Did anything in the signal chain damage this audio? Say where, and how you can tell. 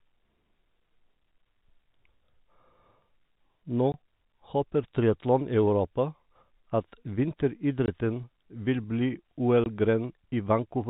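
Yes, at the network stage: packet loss filled with silence. The speech drops to dead silence at 3.92–3.94, 7.86–7.88 and 9.64–9.66 s, with hard edges. Each 20 ms hole fits a single lost packet replaced by zeros.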